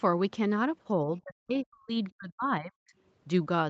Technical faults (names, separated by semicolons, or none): speech suppressed in double talk